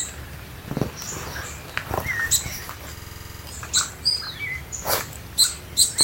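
From 2.97 to 3.44 s, a 46 ms fragment stutters ten times at 21.5 Hz. This is a system hang loop, which fits a stuck 2048-sample buffer replaying.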